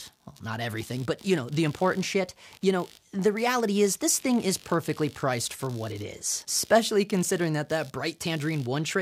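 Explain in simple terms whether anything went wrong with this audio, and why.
Computer activity noise runs through the whole clip, from start to finish. It is a faint buzzing, pulsing roughly 70 times a second and sitting well below the main sound. The computer's processor, graphics card or mouse changes how much power it draws, and that disturbs the electrical ground the audio circuit shares with it. The noise rises and falls with what the computer is doing, not with the recorded sound.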